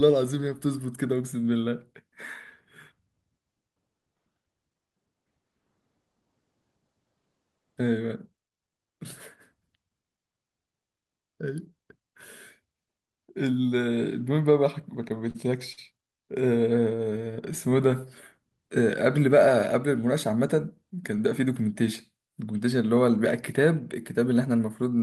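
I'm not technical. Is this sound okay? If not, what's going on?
No. Between 14.81 and 15.37 s, repeated stalls (stutter): audio packets kept arriving late, so playback ran dry four times and the last sound was stretched, making the speech stumble briefly.

From 15.73 to 15.79 s there is a short stall from a late packet: one packet missed its moment, so the system held the sound about 46 ms until it arrived.

From 16.95 to 18.06 s a jitter buffer slow-down happens: the system was building a reserve by repeating tiny slices, so the speech plays at about 91% speed with unchanged pitch.

From 20.29 to 21.49 s there is a jitter buffer speed-up: too much audio had piled up, so the system trimmed roughly a tenth of a second, and the speech sounds hurried, at about 107% speed.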